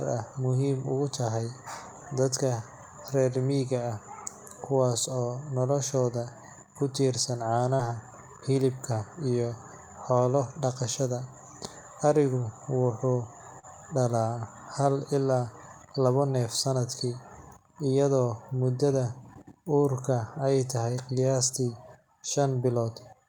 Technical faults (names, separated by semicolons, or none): short concealed packet loss